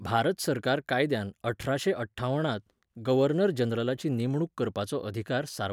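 No technical faults are audible.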